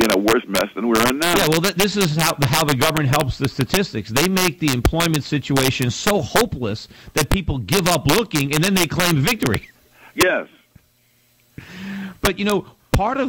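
Integer overflow runs throughout: with the gain pushed about 5 dB too high, the loudest peaks, under one percent of samples, wrap to the opposite sign, giving sharp cracks.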